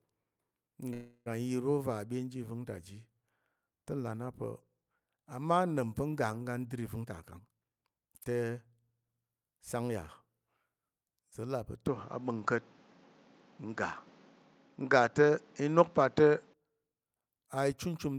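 A speech recording with three distinct faults. From 0.93 to 1.28 s the sound stalls into a fading, smeared continuation of itself for about 325 ms, then resumes where it left off with nothing lost, which is a call audio freeze, likely from delayed packets emptying the jitter buffer. Between 7.01 and 8.65 s the speech runs hurried at about 120% speed, pitch unchanged. This is a jitter buffer speed-up trimming roughly 0.3 s of backlog in small pitch-period slices. From 11.87 to 16.54 s the sound turns duller and boxier, with nothing above 7.6 kHz, a level shift of about 5 dB and new background noise roughly 30 dB down, switching without any gap. That points to the input having likely switched to a poorer device.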